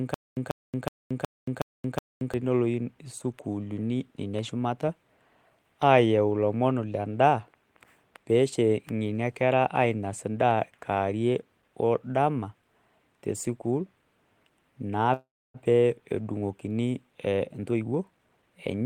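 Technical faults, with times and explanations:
0.00–2.34 s, stutter with silent gaps: already under way when the clip opens, a 141 ms burst of speech repeats six times, each followed by about 227 ms of dead silence, so it pulses every 369 ms. That's likely a stalled stream replaying its last fragment on each retry, and whatever should have played there is gone.
15.13–15.57 s, call audio freeze: the speech hangs as the last sound gets stretched into a fading buzz or hiss, then goes quiet for about 280 ms, with roughly 409 ms filled in total. It's likely late packets draining the jitter buffer. Speech resumes right where it stopped, so nothing's lost, just delayed.
17.27–18.82 s, jitter buffer speed-up: the speech suddenly runs about 21% fast at unchanged pitch and sounds hurried. The receiver is trimming short pitch-period slices over and over to shed excess buffered delay, cutting roughly 0.3 seconds.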